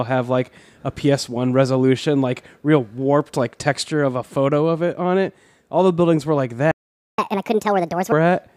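At 6.71 s, right after "the buildings were like", the speech cuts to silence for about 0.47 s, until 7.18 s. This playback stall most likely comes from the player running out of buffered data or its thread being blocked, so output halts mid-flow.

From 7.18 s to 8.12 s the player makes up the lost time with catch-up at higher speed. It resamples its backlog at 1.5 times normal rate, so delivery rushes and pitch rises by around seven semitones.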